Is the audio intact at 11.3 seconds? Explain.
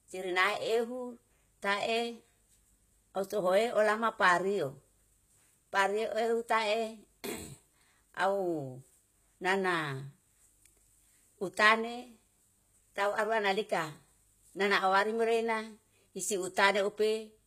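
No. At 11.3 s the speech carries the same damage as the rest of the clip, most likely HE-AAC compression at a rate consistent with about 20 kbps. The codec keeps only the lower spectrum and rebuilds the treble by copying bands upward, so s sounds come out gritty and metallic rather than just dull. That synthetic but bright top, which stops at 14.9 kHz, is what separates it from a plain low-pass filter, where the treble would simply be gone.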